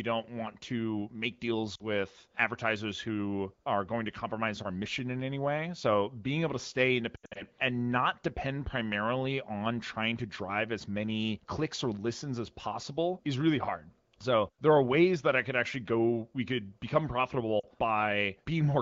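Lost AMR speech frames at 1.75–1.82 s, 7.15–7.45 s and 17.60–17.66 s. Corrupted frames were concealed by repeating the last good pitch and vocal tract settings at falling gain. This wideband AMR stream otherwise keeps the speech clear.

The first dropout, after "don't want to make", lasts 40 ms and dips toward near silence. The second, after "being able to stay", is about 160 ms of loss scattered over 200 ms, with an 80 ms longest run, giving repeated dropouts. The third, after "go we could become", is another 40 ms gap. After each dropout the voice returns briefly weak or rough.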